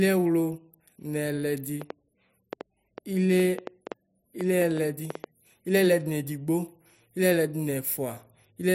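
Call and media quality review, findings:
Train of clicks, 1.82–5.25 s in speech. About fifteen similar pops at roughly 4.4 per second, irregular spacing, peaking about 10 dB above the signal. Audible in pauses too. Likely source: nearby equipment interference or a faulty connection or power supply injecting pulses.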